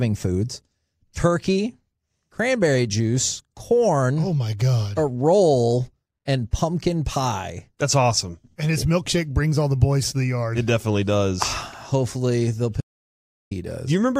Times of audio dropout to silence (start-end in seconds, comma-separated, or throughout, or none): 12.81-13.51